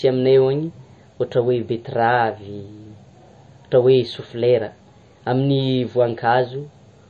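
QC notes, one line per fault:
Throughout: MP3 compression, the likely cause. Nothing remains above 8.4 kHz, because the encoder cut the treble to save bits. Weak frequency detail switches on and off between frames, giving a plainly audible watery swirl. This fits about 32 kbps.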